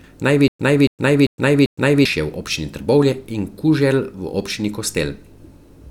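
Speech with a stutter with silent gaps from 0.48 to 2.05 s: a 0.28 s burst repeats four times, each followed by 0.11 s of digital silence, every 0.39 s. The waveform shows identical blocks separated by flat silent stretches, and the spectrogram shows matching vertical slices with blank gaps. The likely cause is a stalled stream replaying its last fragment.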